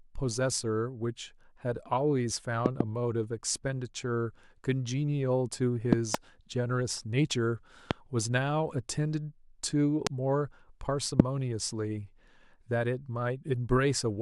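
A voltage step, likely from a plug, switch or static discharge, got into the signal path of this speech recording, and the circuitry after it shaped the pulse into a loud pop. Pops land at 2.66 to 2.83 s and 5.93 to 6.17 s (each a quick double), then singly at 7.91 to 7.93 s, 10.07 to 10.09 s and 11.20 to 11.22 s. Each jumps roughly 25 dB above the speech, which continues underneath.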